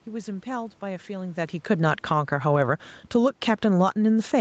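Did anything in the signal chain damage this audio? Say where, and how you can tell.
Yes. Automatic gain falling in the call processing, from 1.7 s to the end: the gain control judged the input too loud, or its background noise too strong, and steadily lowered its gain. The speech and the room noise sink together, which a talker moving, as near 1.0 s, would not cause.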